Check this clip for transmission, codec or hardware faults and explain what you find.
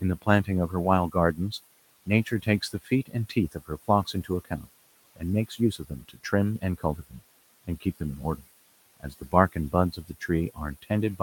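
One fault shows up, and it comes from processing rather than the line or the hardware. It is speech cut by the noise suppressor, in three stretches: 0.22 to 1.52 s, 2.06 to 7.12 s, and 9.0 to 11.2 s. The suppressor mistakes some speech for noise and pulls it down with the background. The room noise sits about 22 dB under the speech. Drops reach about 17 dB in the first stretch and about 15 dB later. Only brief moments are hit, about 1.1 s in total. Soft consonants or word endings sound swallowed.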